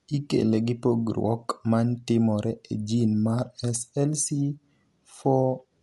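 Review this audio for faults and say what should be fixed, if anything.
Low-bitrate Dolby Digital compression is the likely cause: throughout the speech, the encoder has cut the band so nothing remains above 11.5 kHz and left many frequency lines without bits, which fits a rate around 64 kbps. The speech sounds plainly dull, with a rough, fluttering noise where the decoder fills those empty lines. To prevent this, encode at a higher bitrate or deliver from an uncompressed master.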